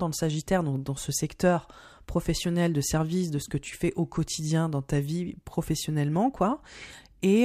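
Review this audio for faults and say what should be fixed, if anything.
Nothing stood out on listening to this speech recording, so there is nothing that needs fixing.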